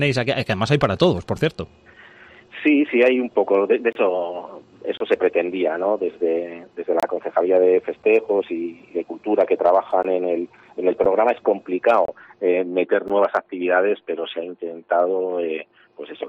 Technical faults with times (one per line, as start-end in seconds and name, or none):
3.93-3.95 gap between stream segments
4.97-5.00 gap between stream segments
7.00-7.03 gap between stream segments
10.03 gap between stream segments
11.04 gap between stream segments
12.05-12.08 gap between stream segments
13.08 gap between stream segments